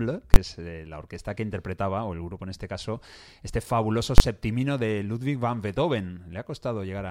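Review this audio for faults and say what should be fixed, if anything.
Invalid numbers at full scale: a calculation produced infinite or invalid values that were clamped to full scale for 20 ms blocks, giving loud single bangs at 0.34 s, before "es eh la orquesta", and at 4.18 s, after "este caso este fabuloso". To prevent it, check every processing stage for infinite or invalid results and replace them with silence before output.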